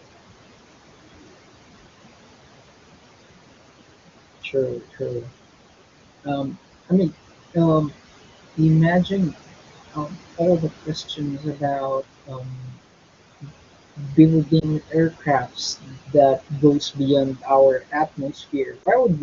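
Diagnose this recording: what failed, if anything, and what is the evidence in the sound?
The noise suppressor artifacts come from call processing. The room noise sits only about 13 dB under the speech, and the suppressor is pulling it down by roughly 20 dB frame by frame. So the background drops away in the gaps and swells back under the talking.

Speech cut by the noise suppressor is also a call-processing fault. The same suppressor is mistaking parts of the speech for noise and ducking them by about 17 to 21 dB. You can hear it at 4.42 to 5.30 s, 6.23 to 7.93 s, 8.56 to 9.35 s, 9.93 to 12.78 s, and from 13.41 s to the end. The early stretches only clip short bits. From about 10 s on, much more gets swallowed, well over a second in each of the last two spans.

The lost AMR speech frames are a network-side problem: a radio error, then the decoder concealing it. At 14.60 to 14.69 s and again at 18.84 to 18.88 s there's a brief dip or warble. 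Each sounds like a single lost frame. The AMR-WB decoder repeats its last good pitch and vocal tract settings at reduced gain, then the sound recovers a touch rough. The wideband codec underneath sounds clean.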